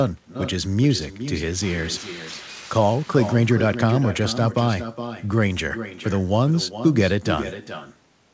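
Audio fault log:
Throughout, echo with no canceller: the far end's loudspeaker feeds its own microphone and nothing removes it, so the speech returns roughly 400 ms later at about 11 dB below the original, a thinner copy trailing each phrase within the 8 kHz-limited call band.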